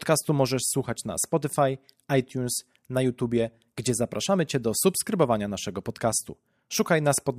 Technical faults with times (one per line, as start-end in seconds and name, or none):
none